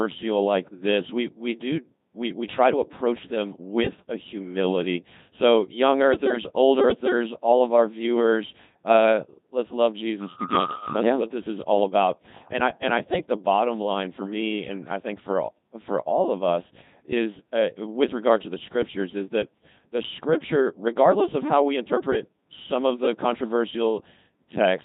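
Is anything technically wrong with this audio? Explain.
Yes. A Codec 2 vocoder runs throughout, with heavy damage that fits its 2.4 kbit/s mode: pitch, voicing and envelope are resynthesised from sine waves, so the speech sounds robotic and buzzy.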